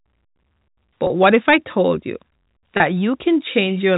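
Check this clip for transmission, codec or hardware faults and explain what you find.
Two short dropouts show up as packet loss with pitch repetition, at 1.07 to 1.10 s, just before "what if I told", and at 2.77 to 2.80 s. At each point about 30 ms of audio never arrived, which fits three 10 ms packets going missing. The receiver covered each gap by looping the last pitch period, so the speech holds briefly on a buzzy, repeated tone before it picks up again. The G.711 A-law telephone band itself comes through intact.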